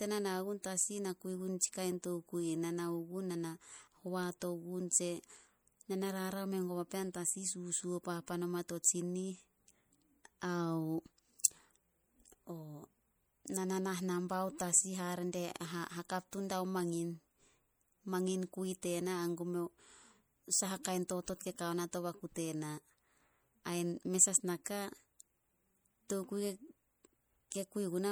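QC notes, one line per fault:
Throughout, MP3 compression. The speech has a plainly audible watery, swirly quality, and s sounds carry a metallic chirp. This is likely the work of an MP3 encoder starved of bits. Its hearing model zeroes weak frequency lines, and these flicker on and off between frames. The damage points to a low rate, around 64 kbps. The treble is not cut off early, though, and content reaches about 21.1 kHz.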